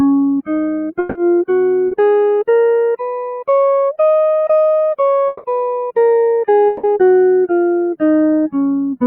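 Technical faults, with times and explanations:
0.99–1.18 s, 5.27–5.46 s and 6.67–6.86 s, long network dropout: each time, roughly 0.19 s of the music goes smeary and buzzy or hissy, with the last sound stretched out and fading instead of the real audio carrying on. The playback then picks up further along with that slice missing. The likely cause is a gap in the stream about 160 ms long that the receiver papered over entirely by extending what it last had, so it never falls to silence.
1.87–1.94 s, short concealed packet loss: a quick wobble or smear lasting about 70 ms. Around 40 ms of audio didn't reach the decoder in time, so it filled the hole by continuing the preceding sound and then blended back into the real signal. That gives a brief blurred patch rather than a clean gap.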